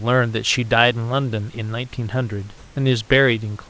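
From 2.58 to 2.76 s, about 180 ms of the pause between speech carries a steady, featureless hiss in place of the real room background, and the level shifts by about 3 dB. This is comfort noise in place of the background, likely from discontinuous transmission: the sender stopped transmitting when no speech was detected, and the receiver generated shaped noise instead. The real background, roughly 29 dB below the speech peaks, loses its texture there. Across the call path, the sound stops at 8 kHz, as G.722 does.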